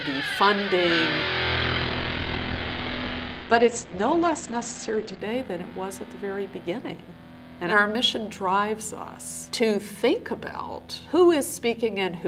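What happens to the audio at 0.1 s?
Nothing goes wrong at 0.1 s; the audio plays through that moment intact, with no dropout, click or distortion.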